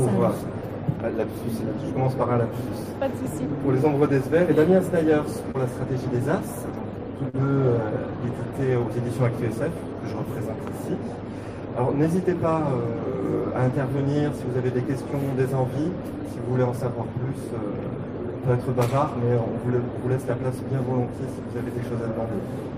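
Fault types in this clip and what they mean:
Short concealed packet loss: at 5.51 s and 7.29 s, brief stretches arrived too late and the receiver patched roughly 27 ms and 40 ms by extending the preceding sound, then blending back. Unlike a plain dropout, no silent gap appears, only a quick smear.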